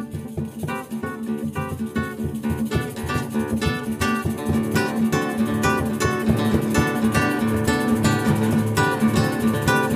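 No technical faults can be heard anywhere in the audio.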